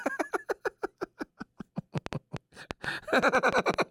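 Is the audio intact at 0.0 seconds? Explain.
Yes, at 0.0 seconds the audio is intact, with no fault at that moment.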